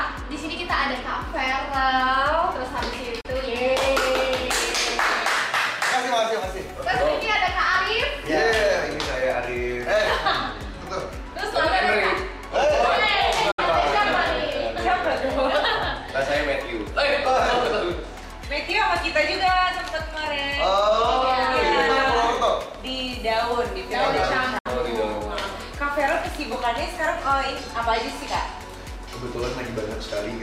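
Three brief digital broadcast dropouts at 3.21, 13.51 and 24.58 s mute the audio for about 32, 64 and 64 ms, with 8 ms fades, consistent with one or two lost frames. Each shows as a narrow blank column on a spectrogram.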